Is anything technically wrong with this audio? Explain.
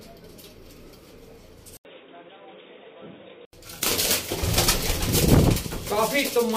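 Yes. From 1.77 to 3.53 s the sound turns dull and boxy, with nothing above 3.8 kHz, plus an 80 ms gap at the switch. This is likely an input switched to a poorer device. The level stays about the same, with a faint new noise floor well below the signal.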